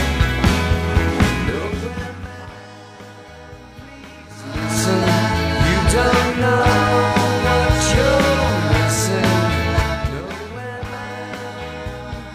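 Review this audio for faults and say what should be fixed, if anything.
Zipper noise runs from 9.75 to 10.31 s. The level drops by roughly 15 dB in 3 dB jumps, about seven a second, with no smoothing between them. Each abrupt jump leaves a small click, so a ticking rides on the sound through the fade.

To prevent it, interpolate gain changes sample by sample or over a short ramp instead of applying them once per block.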